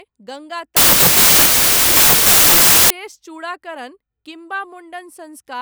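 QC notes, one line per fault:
0.77–2.90 s, wrong sample width: loud noise buries the speech, which plays at 0.667 times speed and correspondingly lower pitch. This fits packed 24-bit data read as 16-bit. Bytes regroup at the wrong boundaries, so only some values keep the signal's top bits.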